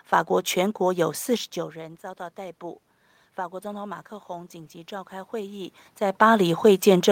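From 3.61 to 5.83 s, the automatic gain rising fault occurs: after the input drops by about 16 dB, the gain control slowly raises its gain by about 5 dB, so the voice and the room noise behind it swell upward together over two seconds.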